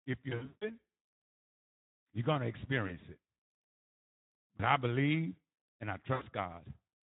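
A speech recording, carried throughout by the Speex codec at a bitrate that sounds like about 11 kbps, with plainly audible codec damage: the voice is hoarse and noisy because the CELP excitation is starved of bits. On a spectrogram the harmonics look smeared and grainy, and any energy above 8 kHz appears as a diffuse, noise-like wash without clear structure. VoIP packet loss concealed by the speech codec occurs four times. The first and worst stretch runs from 0.29 to 0.68 s, where about 240 ms of audio was lost across roughly 320 ms, the longest gap lasting 160 ms. Briefer losses occur at 2.87 to 2.98 s and 4.57 to 4.63 s, each a single 20 ms gap, and at 6.13 to 6.24 s, where about 80 ms was lost. In each gap the decoder repeats its last pitch and filter at falling gain, so the sound drags into a buzzy or coloured tone that fades out and stays weak just after the gap. The waveform shows a smooth, periodic decaying envelope, and the spectrogram shows flat, stretched harmonics in place of normal movement.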